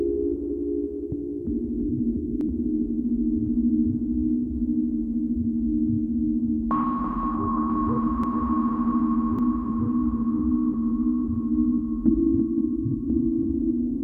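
At 2.41 s, 8.24 s and 9.39 s the sound jumps abruptly, likely a dropped buffer (overrun): a short piece, around 20 ms at the outer two and closer to 70 ms at 8.24 s, never arrives. The waveform shows a hard step discontinuity and the spectrogram a thin vertical broadband line, with no gap.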